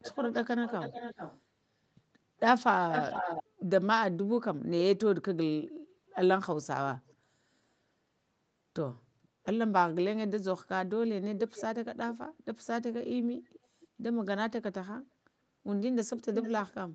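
An echo leak repeats the speech about 0.43 to 0.45 s late at 0.01–1.41, 2.92–3.43, 7.09–7.15, 9.23–9.28, 11.49–11.63, 13.52–13.6, 13.81–13.87 and 16.37–16.62 s. The loudest echo is near 3 s, and the faintest are near 7 and 9 s. The likely cause is a far-end loudspeaker whose echo canceller let some sound through.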